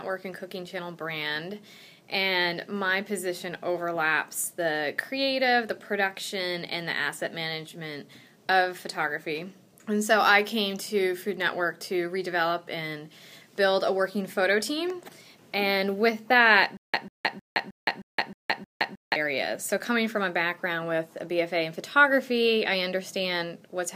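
A stutter with silent gaps runs from 16.77 s to 19.16 s: one short burst of about 145 ms keeps returning, each time followed by about 167 ms of dead digital silence, so the pattern repeats every 312 ms, seven times in all. The likely cause is a playback or streaming stall, where each retry replays the last buffered fragment and then runs dry. The sound that belonged in that span never plays.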